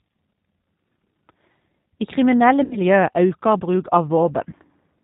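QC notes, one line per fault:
Throughout: G.729 codec. The speech has the slightly rough, synthetic texture of this low-rate VoIP codec, and the damage is plainly audible. Nothing above 4 kHz gets through, so sibilants and crisp consonants sound dull. The grain comes from rebuilding each 10 ms frame out of a vocal tract filter, a pitch predictor and a few pulses, which fits an 8 kbit/s G.729A stream.
2.64–2.78 s and 4.50–4.54 s: VoIP packet loss concealed by the speech codec. At the first spot the sound is stretched into a buzzy tone or coloured noise that fades, which fits about 70 ms of missing audio (seven 10 ms frames). The decoder keeps extending its last pitch and filter while turning the gain down, and the level stays weak briefly after audio resumes. The second gap is shorter, about 20 ms (two frames).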